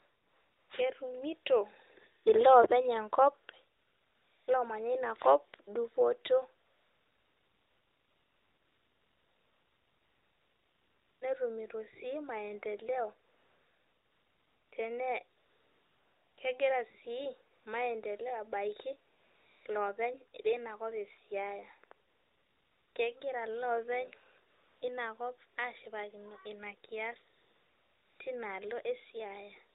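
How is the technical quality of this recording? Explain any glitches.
The recording has one recurring glitch: AMR comfort noise, eleven times between 0.0 and 28.2 s. The phone decided the talker was silent and stopped sending speech frames. The receiver then filled each gap with synthetic noise built from a rough estimate of the background's level and spectrum. The real background gives way to a smooth, steady hiss that switches in and out. The gaps range from a 20 ms blip at 2.24 s to a 4.56 s stretch from 6.66 to 11.22 s. A brief 0.1 s one at 17.56 s falls between "kegira si" and "maendeleo abaki". The audio passes through the AMR-NB narrowband mobile codec, lightly coloured in a way that fits its 12.2 kbps mode, so nothing above 4 kHz comes through.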